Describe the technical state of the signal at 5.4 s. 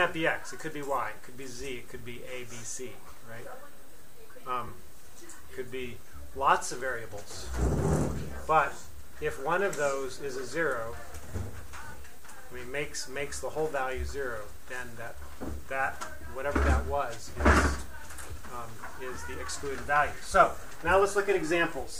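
At 5.4 s the signal runs cleanly, with no dropout, click, distortion or other fault to be heard.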